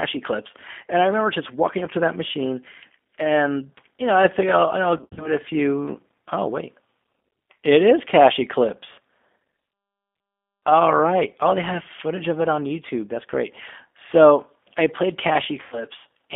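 A speech clip that sounds narrow, slightly rough and synthetic throughout, confined to a telephone band of roughly 250 Hz to 3.5 kHz with plainly audible coding damage. This is the G.729 codec (the G.729A variant at 8 kbit/s), which does not send the waveform itself. It rebuilds each short frame from a vocal-tract filter, a pitch predictor and a handful of pulses, and that sparse excitation gives the voice its buzzy, artificial edge. From 4.97 to 5.33 s, right after "I figure I'll I'll" and before "a few", the voice smears into a stretched, buzzy tone or coloured noise that weakens and then recovers unevenly. A second, shorter dropout follows at 15.63 to 15.85 s, just after "I played". This is VoIP packet loss concealed by the speech codec. In the first gap, packets went missing in scattered bursts over about 200 ms, with the longest run near 60 ms. That points to roughly 150 ms of lost audio, which the decoder filled by repeating its last pitch and filter at falling gain. 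The second gap suggests about 90 ms lost. Because each frame depends on the previous one, the distortion lingers briefly after the packets resume.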